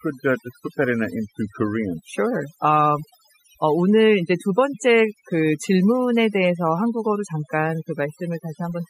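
Throughout the speech, overdone noise removal leaves near-silent gaps with twinkling specks; unlike plain gating, individual frequency bands vanish rather than whole passages.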